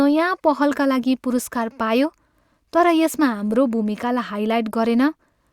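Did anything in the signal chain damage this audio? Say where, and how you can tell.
No, nothing in the chain from capture through to playback has left an audible mark on this speech recording.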